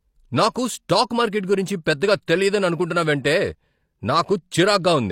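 At about 2.26 s there is a brief pre-echo: a hiss of roughly 16 ms arrives just ahead of a sharp onset in the speech. The transform codec has distributed quantisation noise across the whole block, so noise scaled to the loud attack also lands in the quiet stretch preceding it. The result is a small smear of noise before the transient, which makes the onset sound softened rather than crisp.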